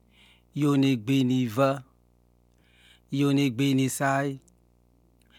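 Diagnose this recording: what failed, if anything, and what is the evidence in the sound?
A faint, steady buzz sits under the speech from start to finish, roughly 40 dB below it, pitched at 60 Hz with a gritty hash riding on top. This is video or display buzz in the analogue wiring: a screen or video cable coupling its 60 Hz field-rate interference into the audio path.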